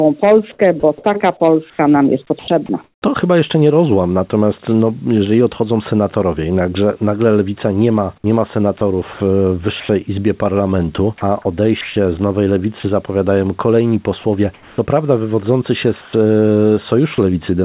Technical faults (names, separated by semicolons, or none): sound dropped by the voice detector; sound chopped by the voice detector; comfort noise in place of the background